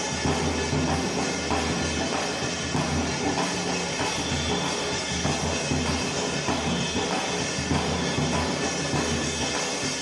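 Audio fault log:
No technical problems can be heard anywhere in the audio.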